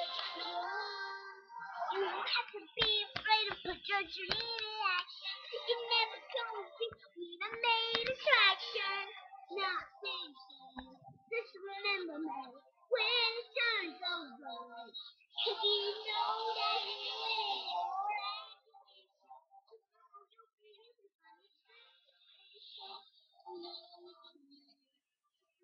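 At 18.07 s the level drops over about half a second, to 18.58 s. It falls by roughly 20 dB in 2 dB steps with no smoothing. This is zipper noise. Each step is a small click, and about twenty come per second. The result is a brief zipping texture riding on the sound. At 22.57 s the same thing happens in reverse, rising by roughly 20 dB until 23.03 s.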